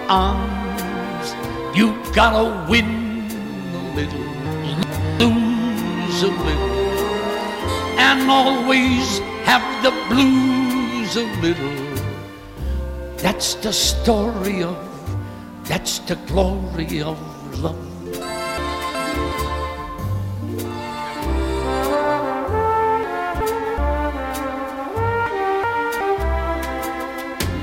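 Chunks out of order occur at 4.46 to 5.20 s, 18.58 to 19.32 s, 23.03 to 23.78 s and 25.26 to 26.01 s. Each time, one 0.37 s chunk plays one slot late. The sound jumbles briefly.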